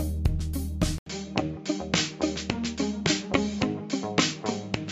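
At 0.98 s the audio drops out for 80 ms, then returns duller and narrower until the end, with nothing above 7.6 kHz and a fresh, faint background noise about 40 dB below the signal, though the overall level stays about the same. This is likely an input switched to a poorer device. On a spectrogram, a brief blank column marks the switch, followed by a flat ceiling at 7.6 kHz and a new noise floor; the waveform shows only the short gap.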